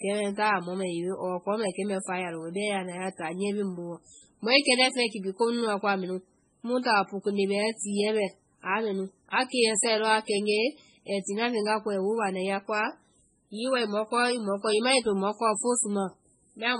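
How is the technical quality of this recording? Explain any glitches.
Quality is poor: heavy compression damage runs through the whole speech recording. Throughout, the sound is watery and swirly, with smeared consonant attacks and chirpy sibilants, likely from MP3 compression at a very low bitrate, around 16 kbps. Starved of bits, the encoder drops treble entirely above about 10.4 kHz and blinks weak frequency lines on and off between frames. A spectrogram shows a hard ceiling and speckled, patchy upper bands.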